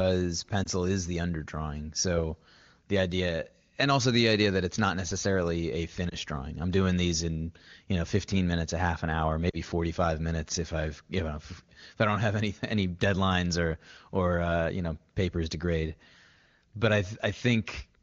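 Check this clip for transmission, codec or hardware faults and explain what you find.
Three short transmission faults, all lost AMR speech frames, carried by the AMR wideband (HD Voice) codec, whose clean, wideband sound fits a high AMR-WB rate. They fall at 0.63–0.68 s, just before "is the underdrawing"; at 6.10–6.15 s, between "it's not necessarily a" and "drawing I'm doing these"; and at 9.49–9.56 s, right after "a half an hour". Radio bit errors corrupted these frames, so the decoder rebuilt them from the last good pitch and vocal-tract settings with the gain turned down. The first two fit one 20 ms frame and come across as a brief dip or warble. The third is longer, fitting two frames or about 40 ms, and the sound drops toward near silence before recovering. Unlike a plain network dropout, there is no hard gap or click, just a softened continuation of the preceding sound.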